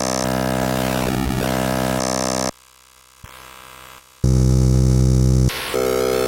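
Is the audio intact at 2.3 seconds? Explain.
Yes, the sound at 2.3 seconds is intact, with no dropout, click or other fault at that moment.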